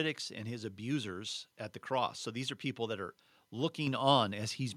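A speech clip in which, at 3.87 s, the whole sound abruptly jumps louder by about 5 dB, the voice and the background rising together in a single step with no fade, and holding at the new level afterward. This is a microphone volume stepped up fault: the call software judged the microphone input too quiet and raised the device's input volume in one jump instead of adjusting gradually, so everything the microphone picks up gets louder at once.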